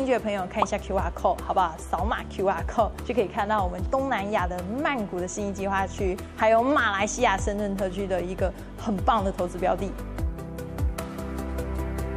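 Listening through the clip, nothing stood out as a technical problem at any point.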